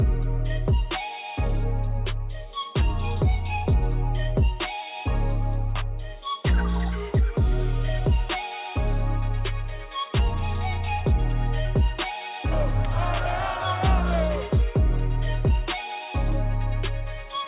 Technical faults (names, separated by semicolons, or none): none